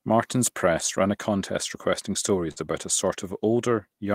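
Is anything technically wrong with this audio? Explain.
Yes, there's a burst of packet loss in this speech from 2.51 to 2.58 s. A run of packets never arrived in time, so the receiver stretched the last sound for about 49 ms, fading it down, then picked up again with roughly 40 ms of speech skipped.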